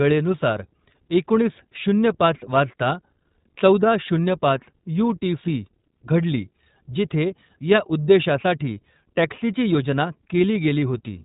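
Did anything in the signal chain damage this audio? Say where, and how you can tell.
Yes, at the codec: throughout, nothing passes above 3.8 kHz and the speech sounds rough and synthetic. That fits iLBC coding independent 20 ms frames, where a plain low-pass filter would add no grain.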